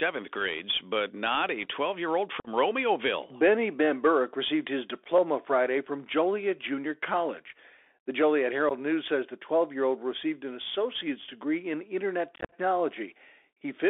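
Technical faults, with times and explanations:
Throughout, Bluetooth CVSD headset codec. The sound is held to about 300 Hz to 3.5 kHz, which fits a 64 kbps one-bit delta link. Its adapting step cannot track loud high energy, so s sounds turn scratchy over a granular hiss.
2.40 to 12.54 s, unconcealed Bluetooth headset packet loss. Abrupt holes appear at 2.40 to 2.48 s after "year old" (45 ms), at 8.69 to 8.72 s (15 ms), and at 12.36 to 12.54 s after "in internet" (105 ms scattered over 165 ms). Silence or an idle pattern fills the gaps, so edges are abrupt and the last stretch crackles.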